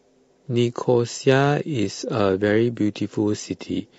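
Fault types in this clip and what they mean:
Low-delay AAC compression: The speech was likely encoded with a low-delay AAC coder of the AAC-ELD kind, which works in very short frames of roughly 10 ms. Frames that short cannot separate closely spaced pitch harmonics well and spend more bits per second, so at a rate that sounds like about 32 kbps the damage is plainly audible throughout: the voice turns rough and grainy, noise fills the gaps between harmonics, and the upper band sounds thinned or synthetic.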